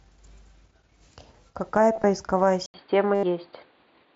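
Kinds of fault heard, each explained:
Concealed Bluetooth headset packet loss: Brief buzzy, held-level stretches with a small warble on recovery, near 1.93 to 2.04 s and 3.15 to 3.23 s, where lost headset packets were filled by repeating recent waveform.
Input switched to a poorer device: After an 80 ms gap at 2.66 s, the sound turns dull and boxy, with nothing above 4.7 kHz, a level shift of about 5 dB and faint new noise, likely from a switch to a narrower-band input.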